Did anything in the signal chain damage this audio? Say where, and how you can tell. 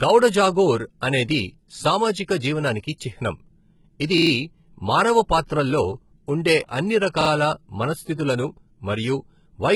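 Yes. At the codec stage, likely HE-AAC compression at a very low bitrate, around 16 kbps. Nothing sounds above 11.8 kHz, and the treble below that is gritty and metallic, with lispy s sounds. That points to replicated bands rather than a simple low-pass filter, which would leave the top dull but clean.

At the driver or buffer stage, repeated buffer faults occur at 4.18–4.31 s, with three extra plays, and at 7.21–7.30 s, with two. Each is a stutter of identical pieces of about 43 ms with hard joins, which fits a 2048-sample buffer. Unlike network loss concealment, the repeats are exact copies and no audio goes missing.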